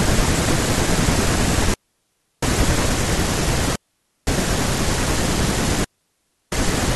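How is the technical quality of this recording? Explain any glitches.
The recording is marred by three digital wireless dropouts in the speech: 1.74 to 2.43 s, 3.76 to 4.27 s and 5.84 to 6.52 s, each lasting half a second to 0.7 s. When the radio link loses too much data, the receiver mutes with a very brief fade, leaving clean near-silent holes. Unlike an analogue wireless dropout, no hiss or noise burst surrounds them.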